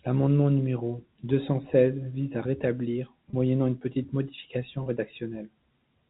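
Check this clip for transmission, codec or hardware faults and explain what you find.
Two brief dropouts of packet loss with pitch repetition, at 3.30 s (after "à la rétablir") and 4.83 s (after "moyennant une petite modification"). Each gap is about 30 ms, which fits one lost packet. The receiver bridges it by repeating the last pitch period, giving a short held, buzzy tone. The band-limited G.711 telephone sound is also audible.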